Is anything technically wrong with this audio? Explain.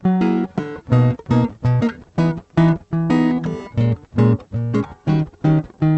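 No, nothing technically wrong with this music.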